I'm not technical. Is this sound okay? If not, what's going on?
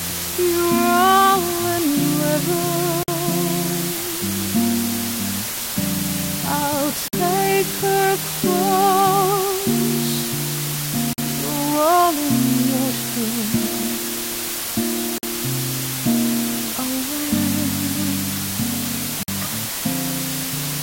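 No. Low bit depth with dither runs throughout: a steady, even hiss nearly as loud as the sound itself, which fits storing it with only about 4 bits of detail plus added noise.

Gaps between chunks appear at 3.03, 7.08, 11.13, 15.18 and 19.23 seconds: the audio arrived in 4-second pieces with 50-millisecond silences at each join, heard as abrupt dropouts.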